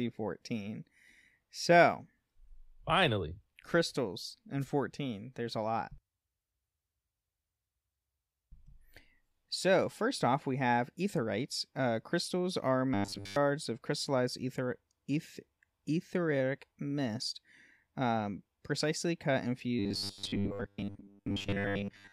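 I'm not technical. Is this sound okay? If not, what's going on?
No. There are two kinds of problem in this speech.

Wireless microphone noise hits at 4.60–4.66 s and 9.61–9.64 s: brief swishes of static. The radio link from the microphone dipped for a moment, letting the receiver's own hiss and crackle burst through over the voice.

Robotic sound from repeated short buffers at 12.94–13.36 s and from 19.79 s to the end: the voice becomes a stiff metallic buzz. Fresh audio was likely arriving too slowly, so tiny 10 ms slices were replayed over and over, replacing most of the real sound and stamping a steady 100 Hz drone onto it.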